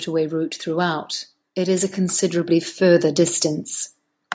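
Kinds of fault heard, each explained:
Automatic gain rising: the speech and the background noise swell together, climbing by about 7 dB over roughly three seconds, from 0.63 s to 3.72 s. The automatic gain control judged the input too quiet and gradually turned its gain up.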